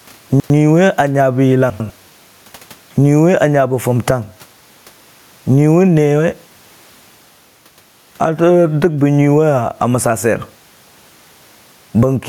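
Gain pumping runs through the whole clip, from the first second to the last. The level rises and falls by around 10 dB as a fast limiter or compressor clamps down on each loud syllable and then lets go. This is likely because the input gain is set far too high for the microphone. The room noise sits about 45 dB below the speech. The speech comes across squashed, with loud and soft parts pressed close together.

Chunks out of order occur at 0.3 to 0.5 s and again at 1.7 to 1.9 s. In each case a 100 ms chunk of audio arrived late and plays one position after the chunk that should have followed it, so two neighbouring pieces swap places. No audio is lost, but the order is scrambled, leaving three hard joins per event. Each is heard as a brief jumbled moment.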